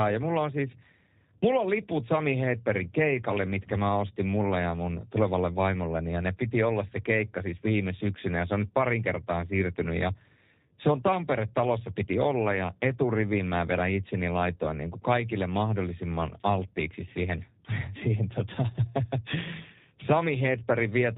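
From start to end the speech carries G.729 codec damage: nothing above 4 kHz, a rough, synthetic buzz, consistent with low-rate 8 kbit/s pulse-coded reconstruction.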